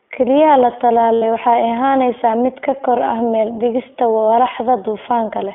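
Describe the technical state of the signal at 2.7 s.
At 2.7 s the speech carries the iLBC codec damage heard throughout. Each 20 ms frame is coded on its own, so the sound is rough and synthetic. The band sits near 250 Hz to 3.4 kHz, which fits a low-rate narrowband VoIP stream.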